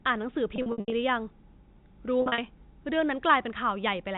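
From 0.56 to 0.92 s and 2.22 to 2.38 s the speech turns briefly held and buzzy: packet loss with pitch repetition, looping the last pitch period over gaps.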